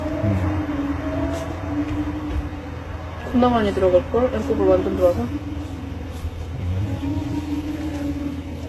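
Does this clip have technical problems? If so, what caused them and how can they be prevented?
Yes. Transcoding between lossy codecs, likely a low-rate HE-AAC encode re-encoded to Vorbis, smears artefacts throughout, with nothing above 12.3 kHz. Encode once from the original source.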